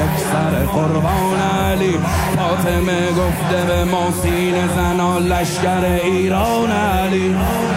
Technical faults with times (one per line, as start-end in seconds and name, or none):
none